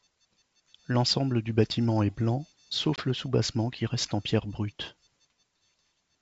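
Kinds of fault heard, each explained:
Packet loss on an ADPCM call: a 20 ms hole, about one packet's worth, cuts in after "du bâtiment est blanc". The decoder's predictor and step size lose sync with the sender's, so "le soubassement qui reste" comes back slightly distorted.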